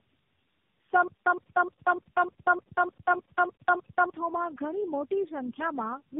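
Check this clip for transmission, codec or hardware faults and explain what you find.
Two faults are present: tandem speech coding across the whole clip, and a stutter with silent gaps in the middle.

Tandem speech coding runs from start to finish. The speech is band-limited with nothing above 3.8 kHz, and it sounds rough, muffled and warbly. That points to the signal being decoded and re-encoded through several narrowband speech codecs in series, ending in a low-rate coder of the AMR-NB kind. Each stage models the previous stage's errors as if they were speech, so the distortions compound.

A stutter with silent gaps occupies 1.08 to 4.10 s. A 117 ms fragment of speech repeats ten times, each time followed by about 185 ms of digital silence, giving a steady 302 ms cycle. The likely cause is a playback or streaming stall: on each retry the buffer replays its last fragment and then runs dry. 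The speech that should have filled those three seconds is missing.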